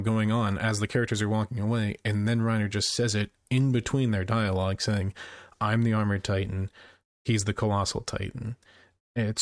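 No technical faults are audible.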